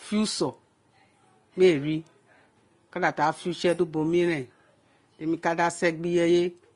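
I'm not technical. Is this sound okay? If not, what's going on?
No, not quite. All the way through, the speech sounds a bit dull, with nothing above about 10.7 kHz, so the crisp top end is missing. That points to transcoding between lossy codecs: the recording was likely squeezed by one compressed format and then squeezed again by another. The second pass adds its own flaws on top of the first pass's, and you hear both at once.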